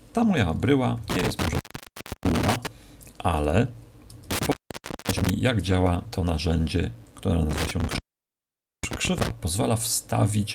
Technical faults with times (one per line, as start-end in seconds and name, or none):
1.10-2.67 intermittent contact
4.31-5.30 intermittent contact
5.48-6.61 call bitrate drop
7.51-9.30 intermittent contact